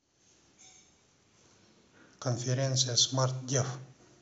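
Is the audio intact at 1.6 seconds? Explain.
Yes, the speech at 1.6 seconds is intact, with no fault to be heard at that moment.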